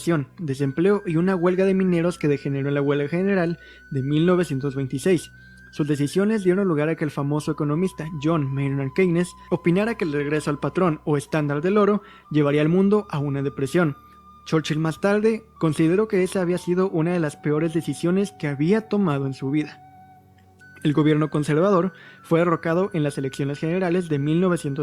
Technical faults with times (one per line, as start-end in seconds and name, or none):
none